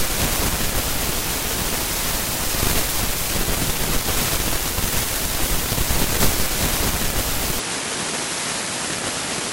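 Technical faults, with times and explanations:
7.59–9.52 s: input switched to a poorer device, likely. Sound abruptly dulls, nothing above 11.4 kHz, level drops about 5 dB, new background noise appears.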